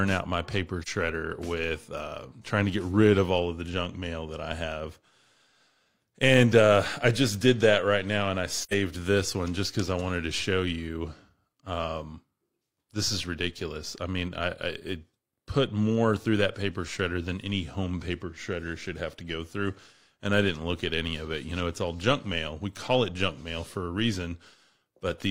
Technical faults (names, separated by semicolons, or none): AAC frame loss with muting